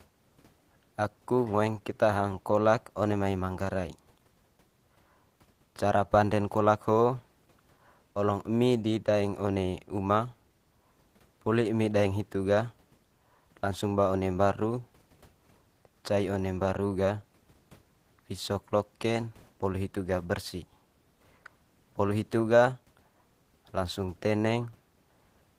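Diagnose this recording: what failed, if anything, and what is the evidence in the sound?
Nothing failed; room noise sits about 38 dB below speech.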